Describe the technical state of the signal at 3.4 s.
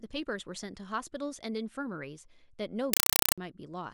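Around 3.4 s the link was carrying a compressed stream played as audio: an encoded Dolby Digital bitstream reached the output undecoded and was treated as ordinary samples, from 2.93 s to 3.38 s. Each coded frame becomes a 4 ms burst of noise followed by silent padding, repeating 31.25 times a second. The speech is replaced by loud, rattling static, consistent with a 192 kbps AC-3 stream, and that chatter is just ending at 3.38 s.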